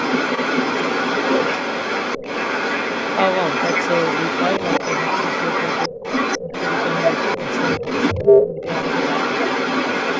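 From the start of the speech to its end at about 10 seconds, the other side's voice leaks through, likely because the echo canceller left loudspeaker sound in the microphone signal. The leaked voice runs roughly 5 dB louder than the talker, and on a spectrogram it shows as a second set of harmonic traces overlapping the main one throughout.

Speech is suppressed in double talk at 5.89 to 5.97 s, 6.41 to 6.53 s, 7.80 to 7.84 s and 8.24 to 8.61 s. The talker's voice is likely being turned down because the canceller could not separate it from the loudspeaker echo. Three dips are deep and one, at 7.8 s, is shallow. On the waveform they appear as sudden notches in the envelope, and on the spectrogram as brief faded vertical bands.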